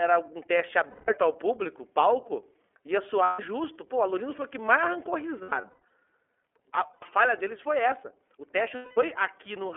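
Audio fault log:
throughout: iLBC codec. The speech is confined to a telephone band of about 300 Hz to 3.4 kHz, so nothing above 4 kHz reaches the listener and sibilants lose their edge. Each 30 ms frame's excitation is coded independently, which leaves a plainly audible rough, slightly synthetic texture on the voice, consistent with the 13.33 kbps mode. The damage comes from coarse excitation coding, not from filtering alone.
0.90–1.09 s, 3.23–3.40 s, 5.43–5.91 s, 6.93–7.02 s, 8.75–8.98 s: lost iLBC frames. Each gap is filled with a held, faintly buzzy vowel-like tone. The decoder is repeating the last pitch cycle mixed with noise and fading it as the loss lengthens. The gaps last 180, 150, 90 and 210 ms, in line with six, five, three and seven 30 ms frames. After "o que mais arrancou", 270 ms is lost in scattered pieces over about half a second, the longest run near 100 ms. Just after the 90 ms gap comes "a falha deles foi". 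Because frames stand alone, the voice recovers almost immediately after each gap.
4.30–4.34 s: wireless microphone noise hit. A brief swish of static, about 40 ms long, lands just before "foi o que mais". An analogue FM radio link faded as reflected paths cancelled, and receiver noise rose over the signal. This short burst is that noise breaking through before the carrier recovered. It comes from the radio hop ahead of the codec, not from the packet network.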